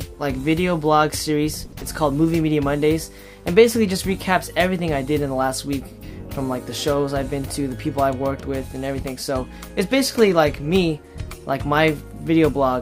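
The audio has three network faults. From 1.65 to 1.74 s there is a short stall from a late packet. The last sound is held about 70 ms too long, and nothing is lost. At 1.78 to 1.83 s, short concealed packet loss leaves a brief smear. About 40 ms never arrived, and 30 ms was filled by extending the preceding sound. From 8.68 to 9.04 s, a jitter buffer speed-up makes the audio run about 8% fast at unchanged pitch. Roughly 40 ms is trimmed out to cut the built-up delay.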